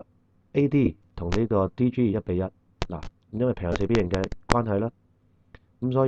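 At 0.85 s, lost LE Audio frames leave a gap of about 15 ms. The LC3 decoder fills it by repeating the last spectrum with scrambled phase. It sounds like a brief noisy smear. From 3.73 to 3.75 s, a longer 22.5 ms loss smears the same way.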